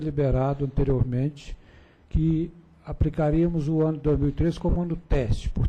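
Lost LE Audio frames at 4.70 to 4.76 s leave a 60 ms gap, which fits about six 10 ms frames going missing. The LC3 decoder fills it by reusing the last spectrum with random signs and fading it after the first few frames, so the sound briefly turns into a noisy smear.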